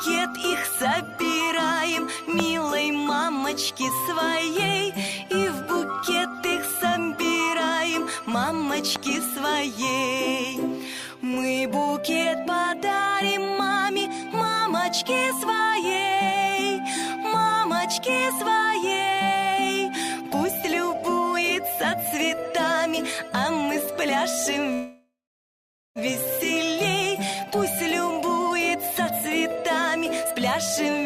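Two loud pops, at 2.40–2.42 s and 8.96–8.98 s, peak roughly 20 and 15 dB above the audio. The audio carries on underneath, which sets them apart from dropouts, and they most likely come from electrical transients. At 24.73–25.99 s a call audio freeze inserts a 1.22 s gap that fades to about 0.83 s of silence, most likely from delayed packets emptying the jitter buffer. Unlike packet loss, the audio resumes exactly where it stopped. A jitter buffer speed-up follows, with playback running at 107% from 28.22 to 29.13 s, at 106% from 29.56 to 30.36 s, and at 147% from 30.88 to 31.03 s. Each stretch drops a few tens of milliseconds of pitch periods, so the audio sounds hurried while the pitch stays unchanged, unlike a simple resampling speed-up.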